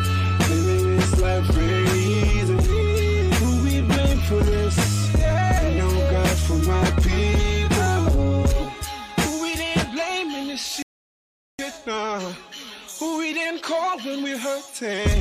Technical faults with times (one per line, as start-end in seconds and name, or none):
10.82-11.59 rebuffering stall